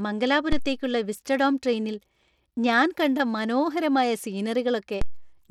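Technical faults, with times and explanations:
Throughout: Bluetooth SBC compression, likely from a starved bit pool at about 96 kbps, leaves the treble thin and flickering, with gritty noise and aliasing on the speech.
0.52 s and 5.02 s: DC step, the waveform's zero line jumps suddenly and then slowly drifts back, so each jump is heard as a low thump under unchanged sound.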